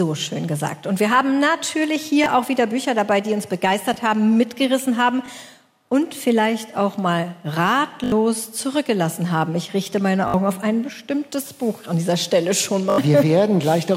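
At 2.24 to 2.26 s, 3.94 to 3.96 s and 5.26 to 5.28 s, a repeated buffer causes a brief click. Fresh audio arrived late, so the device replayed its last block, which fits a 20 ms buffer. Each repeat is a hard join. At 8.04 to 8.12 s, 10.28 to 10.34 s and 12.9 to 12.98 s, the same block loops several times. These sound like short buzzy stutters, and about 70 ms of audio goes missing.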